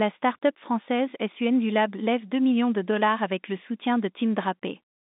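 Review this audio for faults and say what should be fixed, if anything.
The speech carries the expected sound of G.711 telephone coding, with the line band running from 200 Hz to 3.7 kHz and nothing above 3.8 kHz, and nothing in it needs to be fixed.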